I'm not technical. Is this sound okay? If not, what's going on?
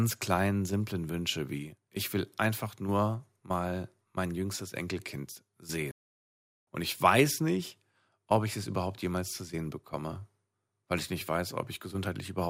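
No. At 5.91 seconds the speech cuts to silence for about three quarters of a second, until 6.67 s. This is a playback stall: the player likely ran short of data and paused. Unlike a click or crackle, it's a clean, noticeably long gap.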